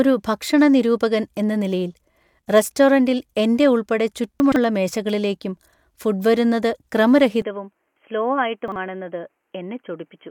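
From 4.4 to 4.56 s, just before "മേശകളിലേക്കും ഫുഡ് വരുന്നത്", chunks arrive out of order: a 40 ms chunk is written three chunks late and plays after the audio that should follow it. Nothing is lost, but the speech jumbles briefly at the hard joins.

At 7.42 s the input has likely switched to a poorer device. From there to the end, nothing passes above 3.2 kHz, so the speech turns dull and boxy. It also drops by about 5 dB, with no gap at the switch and only a faint noise floor.

Between 8.68 and 8.76 s, a 40 ms chunk again plays out of order, one chunk late, causing another brief garbled moment.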